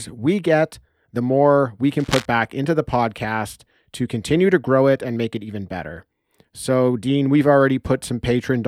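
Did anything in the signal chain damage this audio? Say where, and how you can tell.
Yes, in the analogue wiring: a worn cable or connector was likely shifted, making its contact resistance jump erratically. The result is cable scratch noise from 1.98 to 2.25 s, between "get the more we" and "back into the podcast", a ragged rustling about 10 dB below the speech.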